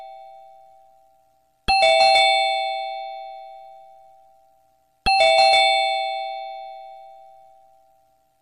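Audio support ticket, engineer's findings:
No faults found on listening. Nothing in the audio calls for a component check or further action on this ticket.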